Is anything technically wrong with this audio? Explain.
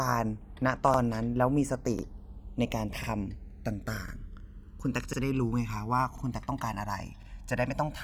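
Yes, two faults are audible in this speech recording.

Channels drifting apart runs through the whole clip. The left and right channels appear to be clocked by separate devices that disagree by a couple of hundred parts per million. The delay between them slowly grows to roughly 1.5 ms, so mixed to mono the comb notches creep through the spectrum, giving a slow flanging sweep.

Overlapping chunks appear at 0.94, 1.99, 3.04, 4.09, 5.13, 6.18 and 7.23 s. The audio was handled in one-second blocks, and each new block begins about 48 ms before the previous one finished. That slice plays twice at every join, producing a regular stutter or click roughly once a second.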